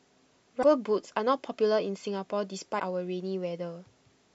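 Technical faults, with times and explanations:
0.59–0.64 s and 2.76–2.81 s, damaged data in a compressed stream: two brief bursts of roughly 50 ms each break into the speech as a harsh chirp or blip. Part of the encoded data at these points is corrupted, so the decoder cannot read those frames properly, produces garbled output, and loses sync until it finds the next valid frame header. The short, identical lengths fit a frame or two of damaged data each time.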